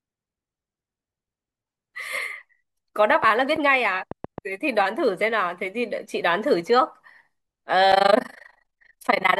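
From 3.24 to 4.39 s, a train of clicks ticks over the speech. About five similar pops arrive unevenly, roughly 3.5 per second, peaking around 10 dB above it. Nearby interference is the likely cause.

From 7.92 s to the end, overlap-add ripple sets in. Frames were rejoined with uneven overlap gain, so the level dips by about 60 dB around 30 times a second. It sounds like a harsh robotic flutter.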